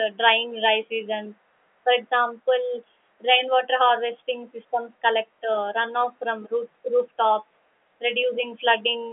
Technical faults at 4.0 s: none

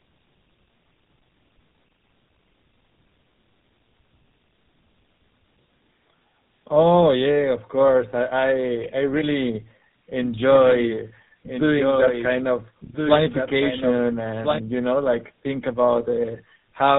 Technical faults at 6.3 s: tandem speech coding

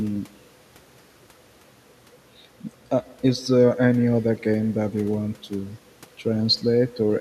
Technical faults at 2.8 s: echo with no canceller

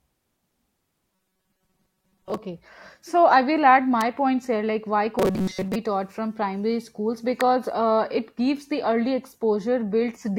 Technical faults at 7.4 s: electrical switching spike

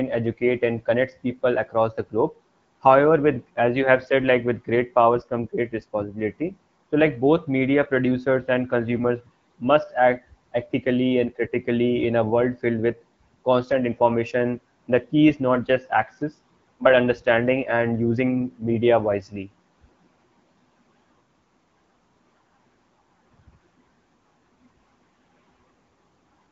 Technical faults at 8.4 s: none

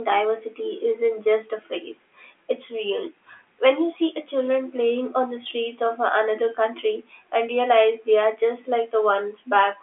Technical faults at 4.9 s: none

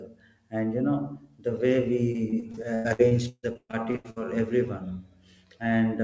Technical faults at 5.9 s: none

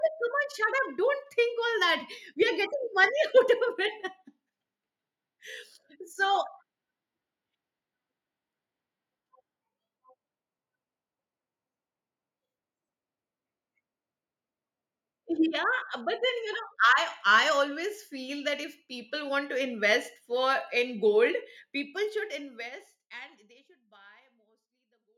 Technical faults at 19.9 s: none

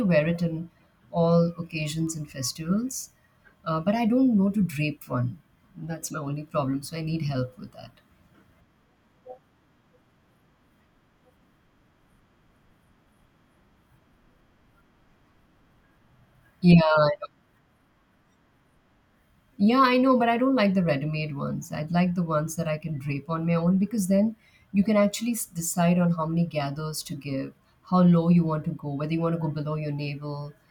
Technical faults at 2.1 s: bit error spike

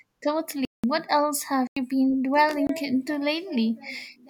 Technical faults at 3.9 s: none

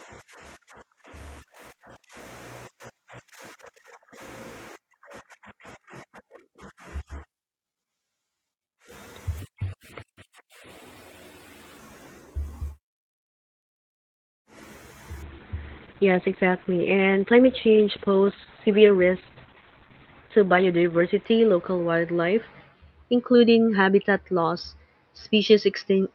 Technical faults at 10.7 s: section at the wrong speed

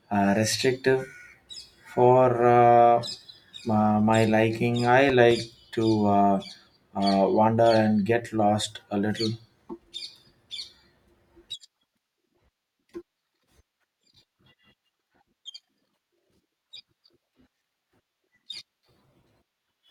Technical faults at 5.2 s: loud pop

